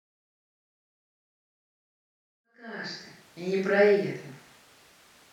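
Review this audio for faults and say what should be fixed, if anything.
Nothing in this speech recording needs fixing. The level rises in a smooth fade-in from roughly 2.5 s to full level at 3.5 s, with no click or hard edge.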